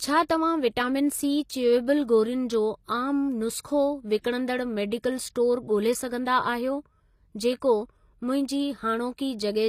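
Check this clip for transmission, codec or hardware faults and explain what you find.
Two codec faults are audible in this speech. Throughout, s sounds come out gritty and metallic, with no content above 15 kHz. This is likely HE-AAC compression synthesising the treble from copied lower bands, at a rate that fits roughly 24 kbps.

From 3.61 to 3.65 s, a short hiss runs just ahead of a sharp onset, softening it. This is pre-echo: the codec's block-wide quantisation noise spills 32 ms before the attack.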